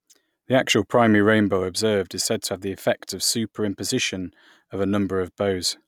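Nothing in this bit of speech stands out as a technical fault; there's no moment where anything goes wrong.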